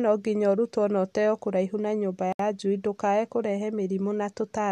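A gap at a join of encoded pieces opens in this speech from 2.33 to 2.39 s, just after "ũteo kũraihu na nyũmba": about 69 ms of silence with smeared edges. Separately encoded segments were joined untrimmed, leaving encoder delay and final-frame padding in place before the speech resumes where it stopped.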